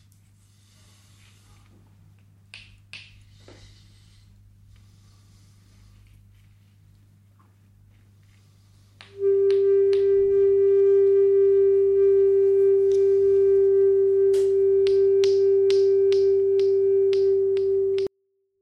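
At 18.07 s, a 24-bit alignment error sets in and lasts to the end of the clip at 18.62 s. Samples packed into the low three bytes of each 32-bit word are being read as full 32-bit integers, so every value lands 8 bits lower than it should. That shifts the level down by about 48 dB in one step: the sound stays clean and undistorted, but it abruptly sinks to near inaudibility for the final half second.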